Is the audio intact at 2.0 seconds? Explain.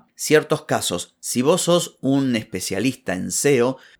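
Yes, the audio is intact at 2.0 seconds, with the speech continuing there without any audible fault.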